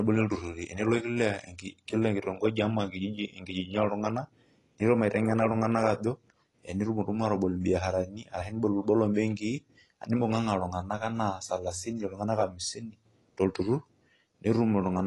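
From start to finish the speech is dull and smeared, with a watery, fizzy texture on sibilants and sustained vowels, most likely from AAC compression. Nothing survives above 11.5 kHz, which fits a low-bitrate AAC-LC encode around 32 kbps. Too few bits forced the encoder to drop high frequencies and quantise coarsely. On a spectrogram the top band stops at a flat ceiling, with patchy holes and speckled noise beneath it.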